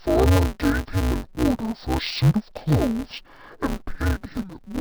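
From start to finish the speech carries an interleaved-audio-read-as-planar fault. Each 5.33 ms block, which fits a 256-sample block, has its alternating left and right samples split into halves and stretched. The result sounds dull and robotic, with a steady buzz at about 188 Hz and no clear octave drop. A spectrogram shows even horizontal bands spaced 188 Hz apart. The waveform shows a repeating seam every 5.33 ms.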